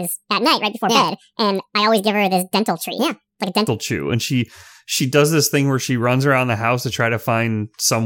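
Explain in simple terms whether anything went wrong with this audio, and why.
Something did go wrong at the start. From 0.0 to 3.68 s there is a section at the wrong speed. The speech plays about 1.7 times too fast. Because speed and pitch are tied together, the voice also jumps up a lot, close to an octave. It sounds squeaky and rushed. Then it suddenly drops back to its natural pace. The likely cause is that this part was played back against the wrong clock.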